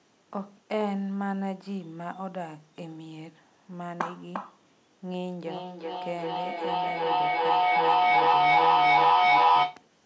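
Feedback echo between two devices runs from 5.46 to 9.89 s. A second device in the room replays the speech into the first microphone, and neither echo canceller removes it. Repeats come roughly every 0.4 s, thin and ringing, and pile up to about 12 dB above the speech.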